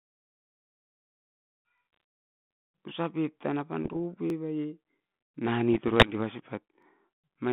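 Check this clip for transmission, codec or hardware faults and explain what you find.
Two kinds of fault show up, riding on a telephone-band path that sounds like 32 kbit/s G.726, with nothing above 3.5 kHz.

Overlapping chunks at 1.78, 4.30 and 6.82 s: each 2.5-second block starts 23 ms early, so that slice plays twice, giving a quick stutter-click.

Bit errors on an ADPCM link at 1.93–2.00, 3.84–3.97 and 5.73–6.11 s: flipped bits knock the decoder's step size off, producing rough pops and jumpy level, milder in the last burst.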